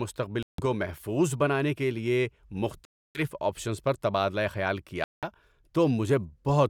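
The speech drops to dead silence three times, at 0.43 to 0.63 s, 2.85 to 3.21 s and 5.04 to 5.24 s, for 157, 299 and 188 ms, then carries on. That's likely a Bluetooth stall: the link got interfered with, the headphone buffer ran dry, and playback paused until resent packets arrived.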